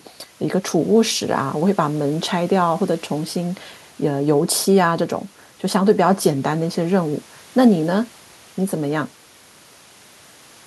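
No technical faults can be heard in this speech recording.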